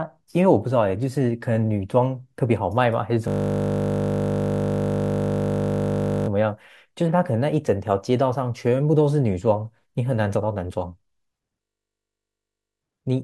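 From 3.28 to 6.28 s and again from 11.62 to 12.82 s, a system hang loop takes over: one 20 ms slice of the speech repeats exactly, making a steady 50 Hz buzz. Unlike a dropout, sound continues, but it is frozen, not silent.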